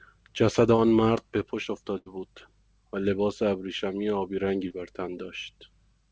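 Speech carried over a call path, with nothing above 8 kHz, which fits a wideband call codec such as G.722. Short concealed packet loss appears at 0.76–0.80 s and 4.68–4.72 s. About 20 ms of audio never arrived, and the receiver bridged each hole by extending the preceding sound. The result is a brief smear or wobble. A burst of packet loss at 1.98–2.08 s is different: roughly 80 ms went missing. The receiver stretched the last sound into about 78 ms of fading fill, heard as a held buzz or hiss, then jumped ahead with that stretch of speech lost.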